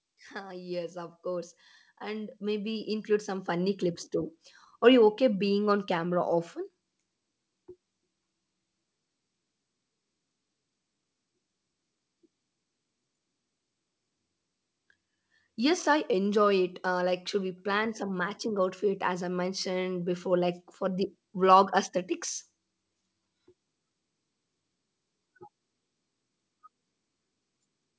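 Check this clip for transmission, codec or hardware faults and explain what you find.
One fault is audible: an automatic gain rising episode at the start of the speech. From 0.33 s to 4.09 s the level climbs by about 14 dB. The automatic gain control judged the incoming signal too quiet and raised its gain gradually over nearly four seconds. Because it scales everything it receives, the voice and the background noise swell together. The audio carries nothing above 8 kHz, which fits the wideband call codec it passed through.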